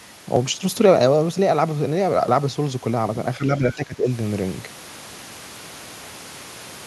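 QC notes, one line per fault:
3.38–4.08 s, speech suppressed in double talk: the echo canceller likely mistook overlapping talk for echo and attenuated it, so the speech dips by about 15 dB.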